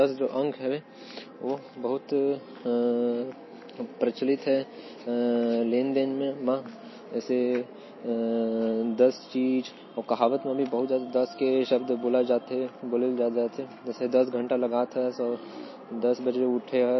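MP3 compression runs throughout the speech: nothing sounds above 5.8 kHz, and the sound turns watery and swirly, with metallic chirps on s sounds and smeared onsets. The cause is likely a low-bitrate MP3 encode, around 24 kbps, where weak frequency lines flicker between frames.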